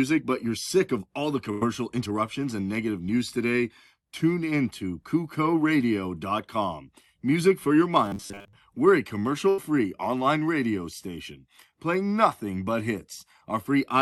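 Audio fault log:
1.51–1.64 s and 9.49–9.61 s, burst of packet loss: Consecutive packets went missing, once right after "sick of all the" and once just before "online radio station playing". The receiver covered each gap by extending the last sound and fading it down, for about 99 ms and then 84 ms. It then skipped ahead, losing 60 ms of real audio each time. The sound thins into a dying buzz or hiss and jumps on, leaving playback delay about 39 ms and 24 ms longer.
1.90–2.23 s, jitter buffer speed-up: After that first loss, the jitter buffer was holding more audio than its target. To drain the excess, the receiver cut short pitch-period slices again and again, removing about 40 ms in total. Playback runs at about 110% speed with the pitch unchanged, so the stretch leading into "and negative news today" sounds briefly rushed and clipped. The delay then settles back toward normal.
8.06–8.54 s, robotic sound from repeated short buffers: Fresh audio was reaching the output too seldom. 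The gaps were likely filled by looping the last 10 ms block over and over, and that loop took up most of this half second while the real signal was skipped. Because the same 10 ms chunk repeats, it imposes a fixed 100 Hz buzz on the sound. The result is a flat, metallic drone that only loosely tracks the underlying rhythm.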